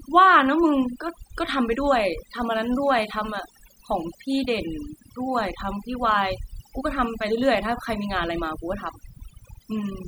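From start to finish the gaps between phrases fall to near silence dotted with twinkling specks. This is overdone noise removal: a noise reduction process set far too aggressively has pulled individual frequency bands down hard, or shut them off entirely, wherever they sat close to its noise estimate. The softer detail of the voice crossed that threshold too and was stripped away along with the noise.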